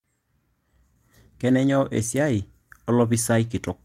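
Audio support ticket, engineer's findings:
Clock drift between sender and receiver, whole clip. Sender's clock runs fast by around 4 percent. Jitter buffer keeps overfilling, so the receiver discards short slices of audio to catch up. Symptom: faint recurring timing hiccups at uneven spacing. Probable component: sender or receiver sample clock.

Repeated timing corrections, 1.28 s to 3.70 s. Playback pushed to about 106 percent speed as the receiver trims small pieces, all in the same direction, to shed the excess. Symptom: speech slightly rushed. Probable component: receiver jitter-buffer adaptation.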